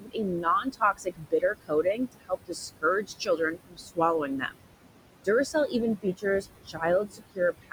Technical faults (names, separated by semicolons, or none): noise suppressor artifacts; speech cut by the noise suppressor